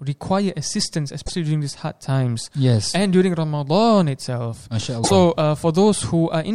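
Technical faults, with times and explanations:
1.22–1.30 s and 5.00–5.11 s, damaged data in a compressed stream: corrupted bytes derail the decoder, which loses frame sync and outputs a brief disruption while resynchronising.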